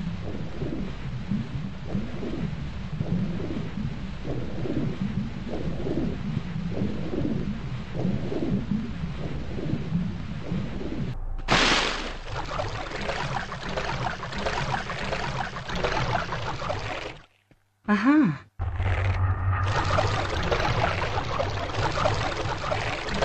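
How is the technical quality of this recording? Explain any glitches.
There is one glitch. From 2.42 to 2.47 s, a brief glitch, about 50 ms long, cuts through the sound. This is damaged data in a compressed stream. A small stretch of the encoded file was corrupted, so the decoder could not read those frames properly. It produced garbled output and lost its place until it locked back onto a valid frame header, leaving this short disruption where clean audio should be.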